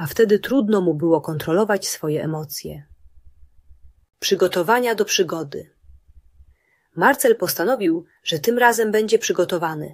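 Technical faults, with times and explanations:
No technical faults can be heard anywhere in the clip.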